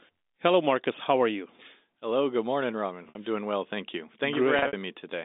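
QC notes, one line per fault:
3.09–3.15 s and 4.59–4.73 s, packet loss with pitch repetition: two gaps. The first loses 60 ms as one run. The second loses about 110 ms scattered over 140 ms, with a longest run of 60 ms, which fits roughly 10 ms packets. The receiver fills each hole by repeating the last pitch period and fading it down, so the sound briefly holds on a buzzy, frozen tone before resuming, heard over the narrow telephone band of the G.711 line.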